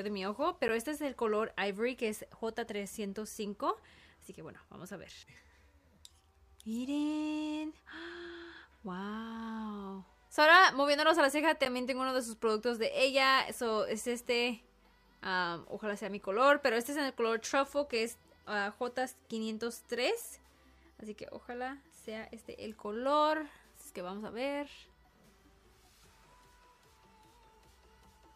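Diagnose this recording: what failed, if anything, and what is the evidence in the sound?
Buffer-stage failure: 10 ms blocks of digital silence at 0.68 s and 11.65 s, heard as ticks. Unfilled output buffers were zeroed with abrupt, clicking edges.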